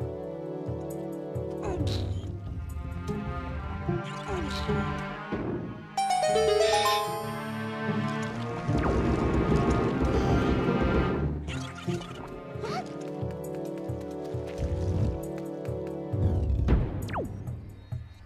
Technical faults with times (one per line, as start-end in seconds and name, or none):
none